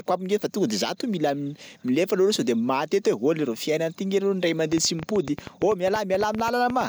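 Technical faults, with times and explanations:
4.73–6.82 s, train of clicks: around twenty sharp, similar pulses at an uneven pace of about 9.6 per second, peaking about 10 dB above the speech and audible as popping through gaps too, likely from nearby electrical interference or a faulty connection or power supply injecting repeated spikes.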